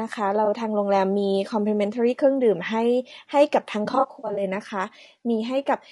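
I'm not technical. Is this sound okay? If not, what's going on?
No. The recording was most likely squeezed by low-delay AAC compression, the kind video calls use to keep delay short. At the low quality setting used it can't capture voice detail well, so the speech sounds rough and grainy all the way through, with a thin, artificial top end.

There are also two spots of AAC frame loss with concealment. Small chunks of audio went missing, and the playback guessed at them from what came before. At 0.45 to 0.48 s this makes a brief smeared blip. From 3.85 to 4.43 s many gaps, the longest around 70 ms, cause a noisy, wobbly stretch.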